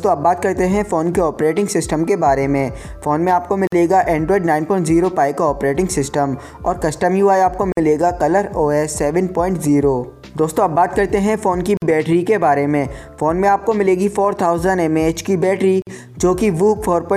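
At 3.67, 7.72, 11.77 and 15.82 s, the sound drops out for about 50 ms, every 4 s. Each is a gap at a join of encoded pieces. Separately encoded segments kept their padding silence. The edges are smeared, and the sound resumes where it stopped.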